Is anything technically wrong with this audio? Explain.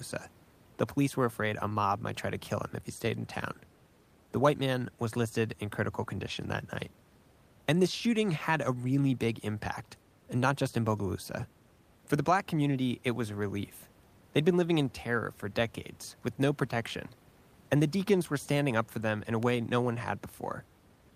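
Yes, there is one fault. At 19.43 s, between "for them in a" and "no one", a single sharp snap sits on top of the speech. This electrical switching spike is likely a nearby switch or discharge arcing briefly, with the audio line picking up the burst. The room noise, about 33 dB below the speech, is part of the recording.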